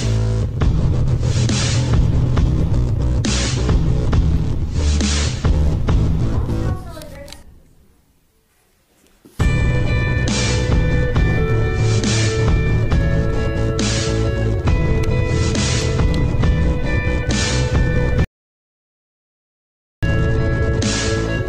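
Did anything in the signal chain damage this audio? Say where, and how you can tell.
Yes. An audio dropout to silence runs from 18.24 s to 20.03 s: the sound stops abruptly and resumes mid-flow after about 1.78 s of silence. Unlike a noise gate, no room tone remains. The input device or link likely disconnected while recording continued.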